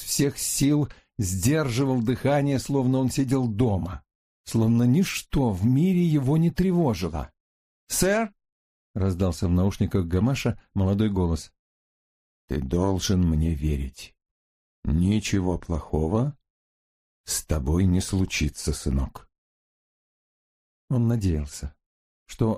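No technical faults are audible.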